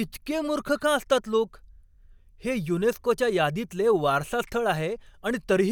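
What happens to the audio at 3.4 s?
Nothing goes wrong at 3.4 s; the speech continues intact through that moment with no dropout, click or distortion.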